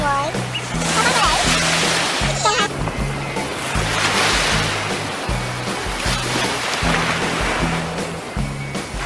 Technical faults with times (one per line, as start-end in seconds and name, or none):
none